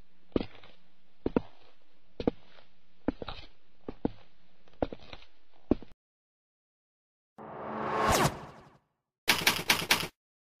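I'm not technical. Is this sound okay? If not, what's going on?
No, not quite at the start. For the first 2 seconds the sound is dull and a bit smeary, with the crisp top end missing or replaced by a fake-sounding sizzle. At 2.0 s it suddenly gets clearer, with no gap or dropout. That's an adaptive stream starting at a low bitrate: the player began on a small, rough version so it could start fast, then switched up to a better version once it had checked the connection.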